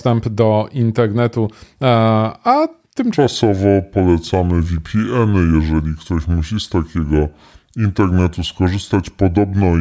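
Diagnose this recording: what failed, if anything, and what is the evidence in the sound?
A wrong sample rate fault appears at playback. From 3.14 s to the end, the speech drops in pitch by 5.55 semitones and slows to 0.726 of normal speed. Pitch and tempo shift together, which fits 22 kHz audio played at 16 kHz without conversion.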